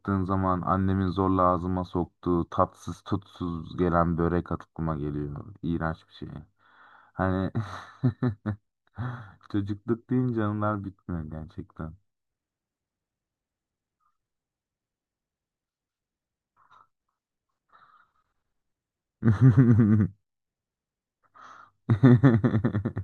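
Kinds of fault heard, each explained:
No technical faults can be heard in this recording.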